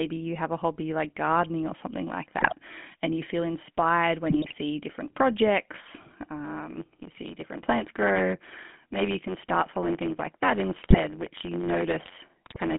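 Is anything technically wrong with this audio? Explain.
Yes. Throughout, the speech has a buzzy, gravelly roughness and sits in a narrow band of about 150 Hz to 3.4 kHz. This is the GSM full-rate codec, which rebuilds the voice from a vocal-tract filter driven by sparse, regularly spaced pulses. That coarse excitation causes the grit.

GSM bit errors appear as brief squawks, pops and gargling at 2.38 to 2.53 s, just after "gardening or something like"; at 4.30 to 4.55 s, after "and you feel inspired"; at 10.82 to 10.98 s; and at 12.46 to 12.58 s. Corrupted filter, pitch or gain values distort the spectrum or level for 7 to 12 frames at a time.

From 6.44 s, after "different projects", to the end, a steady buzz at about 92 Hz runs under the speech, which hurries along about 1.07 times faster. This is a block size mismatch (truncated): one stage writes longer blocks than the next reads, so each block's tail is discarded, which fits 512-sample blocks.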